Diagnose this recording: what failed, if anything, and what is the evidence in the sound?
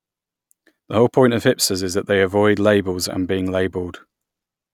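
Nothing failed here: every stage from the capture to playback has done its job, and the speech comes through without a single audible fault to point to.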